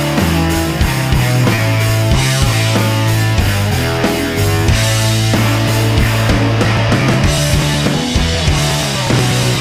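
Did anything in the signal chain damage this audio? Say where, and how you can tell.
Yes. At 1.55 s there is a brief smear lasting about 20 ms, a short concealed packet loss on the network path. That stretch never arrived in time, and the decoder bridged it by extending the preceding sound before blending back into the real signal.

From 6.65 s to the end, regular ticks recur every 0.12 s. These are periodic USB or driver dropouts at the driver or buffer stage. A background task stalls the audio path at a fixed interval, and each time a sliver of signal is simply skipped.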